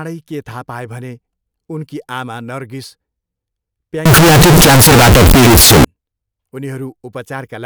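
From 4.06 to 5.85 s the speech turns into very loud, harsh distortion, with quiet stretches as loud as the rest. The likely cause is signed and unsigned mixed up on 16-bit samples: the flipped top bit makes every zero crossing jump across the full range.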